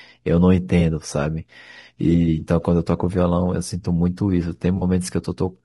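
Throughout this speech clip the voice sounds rough and grainy, with noise filling the gaps between harmonics and a thin, synthetic top end. That plainly audible damage is likely from low-delay AAC compression such as AAC-ELD, whose short frames resolve pitch poorly, consistent with a bitrate around 32 kbps. Two brief smeared, noisy patches, at 0.79–0.82 s and 4.77–4.83 s, come from AAC frame loss with concealment. The decoder patched about 20 ms and then about 40 ms by rebuilding from the last good spectrum, which points to one and then two lost frames.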